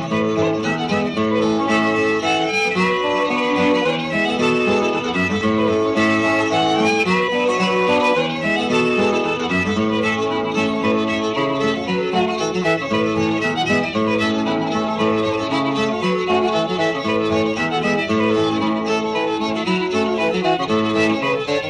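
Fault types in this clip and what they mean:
Compressed frames skipped: a couple of whole frames of the compressed stream never reached the output, either missing from the file or rejected by the decoder as damaged, so playback leaps forward by roughly 50 ms of audio at about 4.99 s. At the join the sound jumps ahead, breaking its continuity.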